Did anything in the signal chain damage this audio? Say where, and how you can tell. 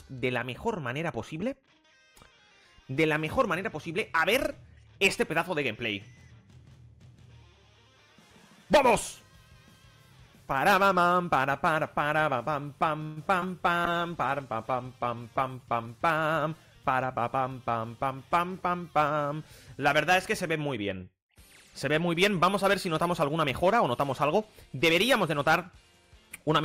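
Yes. At the network and jitter buffer, 13.03 to 13.18 s, there's a call audio freeze: a 130 ms fading buzz, likely delayed packets letting the buffer run dry before playback resumed.

At 13.40 to 13.47 s, short concealed packet loss: about 20 ms never arrived, so the decoder extrapolated the last sound, leaving a brief smear.

Codec side, 13.85 to 15.98 s, a call bitrate drop from 96 to 25 kbps: the audio goes rough and dull while the encoder starves.

From 23.08 to 24.35 s, a jitter buffer speed-up: it trims pitch periods to shed backlog, so the sound runs about 4% fast at unchanged pitch.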